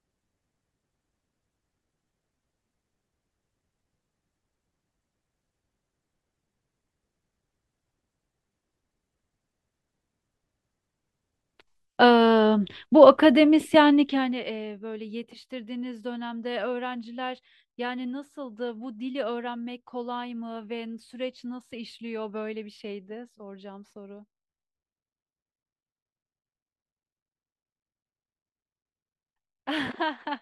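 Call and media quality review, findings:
Zipper noise, 14.04 to 14.44 s. Fast ticking rides on the speech during a gain drop of roughly 15 dB. Probable component: gain stage without smoothing. The level moves in discrete jumps, around 200 a second, which points to a once-per-buffer update, each jump clicking.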